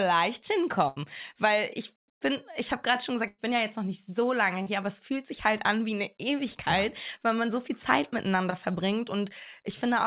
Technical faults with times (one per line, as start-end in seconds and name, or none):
0.88-0.98 burst of packet loss
3.28-3.40 burst of packet loss
4.62-4.68 short concealed packet loss
8.50-8.54 short concealed packet loss